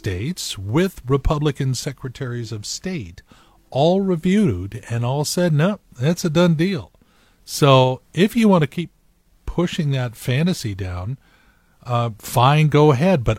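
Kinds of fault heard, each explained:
Compressed frames skipped: a single coded frame of the speech never reached the output, most likely because it was missing from the stream or the decoder rejected it as corrupt. At 0.84 s the audio jumps forward by about one frame, roughly 50 ms, which fits a frame length near 46 ms. At the splice a small piece of speech is gone.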